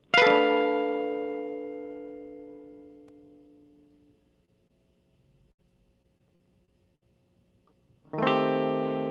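Short concealed packet loss at 4.45 to 4.50 s and 4.68 to 4.71 s in this music clip leaves brief smears where about 20 ms of audio never arrived and the decoder extended the preceding sound. A burst of packet loss at 5.51 to 5.60 s replaces roughly 80 ms with a continuation that fades out, so the music jumps ahead once it resumes. Repeated packet loss (robotic sound) from 6.02 to 7.03 s brings five gaps, the longest 59 ms, that patch about 15 percent of that stretch and make it choppy with pieces missing. All of this arrives through a call codec whose top end stops near 12 kHz, which fits Opus at around 24 kbps.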